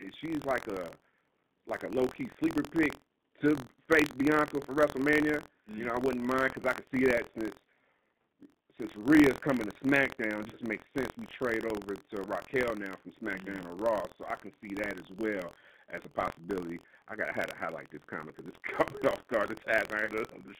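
From start to end the speech sounds narrow, slightly rough and synthetic, with nothing above about 3.7 kHz and little below 150 Hz. That is the G.729 codec at work, and the damage is plainly audible. The decoder rebuilds each 10 ms frame from a modelled vocal tract filter, a pitch predictor and a few pulses rather than the real waveform, and the sound points to its 8 kbit/s G.729A form.

Running under the whole clip and present only while there is signal, a steady robotic buzz sits at 43.1 Hz. This is buffer tearing. The writing program and the reading hardware have drifted so their positions cross inside every period, leaving a small slice of each buffer, around 2 percent, holding audio from roughly 70 ms earlier with hard joins on both sides. The buzz rate fits a 1024-sample buffer.

At 10.49 to 10.56 s, just before "makes sense we trade", the sound briefly smears into a stretched, fading sound. 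That is VoIP packet loss concealed by the speech codec: about 30 ms of audio, consistent with one lost packet, went missing, and the decoder extended its last pitch and filter while lowering the gain. The same stretched, fading colour returns at 20.05 to 20.11 s near the end, again from about 30 ms of lost audio. Because each frame builds on the one before it, the speech stays weak or distorted for tens of milliseconds or more after each gap.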